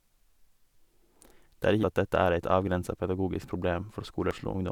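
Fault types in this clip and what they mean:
Damaged data in a compressed stream: corrupted bytes broke the decoder's frame sync, causing two short blips in the speech, at 1.83 s and 4.31 s.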